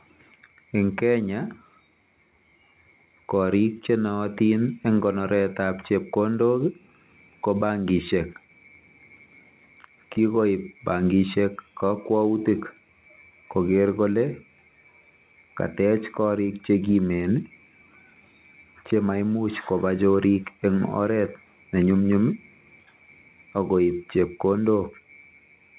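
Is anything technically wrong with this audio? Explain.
No, nothing stood out as a technical problem when listening to this speech, which comes through a telephone-style call path that leaves nothing above 4 kHz.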